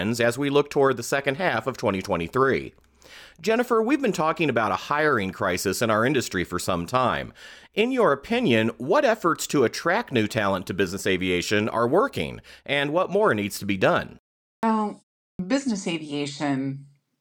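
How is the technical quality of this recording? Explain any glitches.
The recording has a clipped start after a pause twice, at 14.56 s just after "needs to be done" and again at 15.32 s. Each follows a short gap of roughly 0.4 s, long enough for the output device to drop into sleep. It takes about 70 ms to wake and lock again, and that slice of sound is simply lost, so the next word pops in abruptly without its opening.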